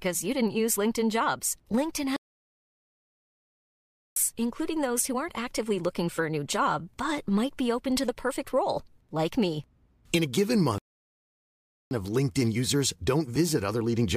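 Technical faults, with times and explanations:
2.16–4.16 s and 10.78–11.91 s, playback stall: the speech cuts to dead silence mid-flow twice, first for a full 2 s before it picks up again at "including those who aren't", then for about 1.1 s right after "a given". Both gaps are clean silence, which points to the player likely running dry of buffered data or having its output thread held up until it recovered.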